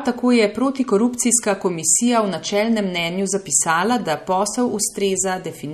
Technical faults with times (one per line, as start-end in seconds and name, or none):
0.00-5.74 MP3 compression